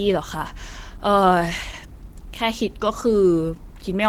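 Throughout, the speech sounds hoarse and grainy rather than swirling like MP3, and it reaches 20.1 kHz: likely Opus compression in hybrid mode, fitting about 16 kbps.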